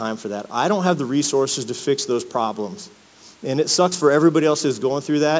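Sample clock jitter runs throughout this speech recording, showing up as a fine hiss and grittiness that rises on loud passages and sibilant, high-frequency sounds and falls away in the pauses. The converter's clock wavers by roughly 3 microseconds, so each sample lands slightly off its proper instant, and the resulting error tracks how steeply the waveform is changing, sitting roughly 25 dB below the signal. The band is limited to about 8 kHz, consistent with call microphone processing.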